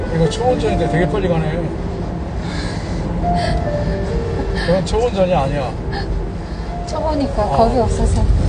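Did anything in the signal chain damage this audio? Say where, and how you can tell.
Yes. From start to finish the audio sounds dull and smeared, with a warbling, fizzy texture on sustained sounds and nothing above 9.8 kHz. The codec stage is the likely cause: AAC compression with the cut-off lowered and sparse quantised bands, which fits AAC-LC at around 32 kbps.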